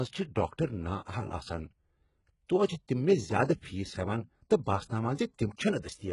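Throughout the speech, the treble sounds bright yet synthetic: s sounds come out gritty and lispy, and nothing is present above about 11.1 kHz. The likely cause is heavy HE-AAC compression, which fits a very low bitrate near 12 kbps. The upper band is rebuilt by copying lower bands upward, so its harmonics fail to line up. Unlike a plain low-pass filter, which simply dulls the treble, this keeps the brightness but makes it metallic and wrong.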